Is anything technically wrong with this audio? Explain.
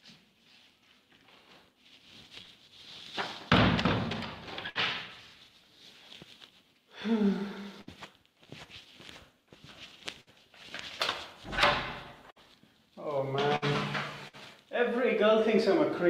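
Yes. Six short dropouts occur, at 4.69 to 4.78 s, 7.81 to 7.90 s, 10.21 to 10.30 s, 12.31 to 12.39 s, 13.56 to 13.65 s and 14.28 to 14.36 s. Each is a burst of packet loss. The sound briefly freezes into a held buzz or fading hiss for about 55 ms, then jumps ahead with roughly 60 ms of audio gone. The receiver extended and faded the last audio it had to cover the lost packets.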